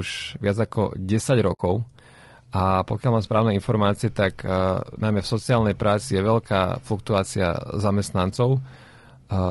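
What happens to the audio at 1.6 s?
AAC frame loss with muting ends at 1.6 s. From 1.53 s the decoder lost a stretch of AAC frames, about 60 ms of audio, which fits three frames at this codec's short frame length. It replaced their spectrum with silence, so the overlapping windows fade the sound down into a brief, soft-edged hole, and at 1.60 s it fades back in.

The whole clip, including this moment, has the rough, grainy texture of low-delay AAC compression, likely AAC-ELD at 32 kbps. Its low bitrate leaves noise between the voice's harmonics and a thin, synthetic-sounding top band.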